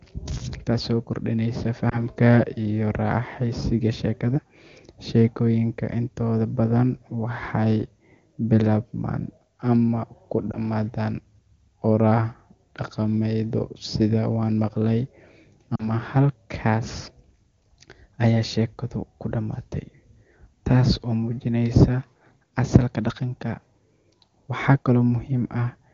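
A brief warble and dip breaks the speech at 1.89 to 2.00 s, between "taasoo kordhinaysa" and "iyo raaxaysiga sheekada", and again at 10.51 to 10.58 s after "waxay bilaabmaan ama ku". A slightly longer smear at 15.75 to 15.89 s fits two lost frames. These are lost AMR speech frames. Damaged frames failed their check, so the wideband decoder, otherwise clear at a high rate, filled each gap by repeating the last good settings at falling gain.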